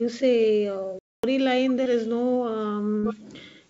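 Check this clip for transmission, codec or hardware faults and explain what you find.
Two kinds of fault are audible in this speech: one playback stall and two short concealed packet losses. The whole clip stops at about 7 kHz, consistent with a wideband call path such as G.722 at 64 kbps.

Playback stall, 0.99 to 1.24 s: the speech halts mid-flow and the output goes silent for about 0.25 s before resuming. The likely cause is the player running out of buffered data or its thread being blocked, so nothing reached the output until it recovered.

Short concealed packet losses, 1.84 to 1.87 s and 2.99 to 3.05 s: audio failed to arrive in time, and the receiver bridged each gap by extending the preceding sound before blending back into the real signal. At 1.84 s roughly 20 ms went missing and about 15 ms was synthesised, giving a brief smear. At 2.99 s the full 40 ms hole was filled, a longer wobble in which a short sound can be lost.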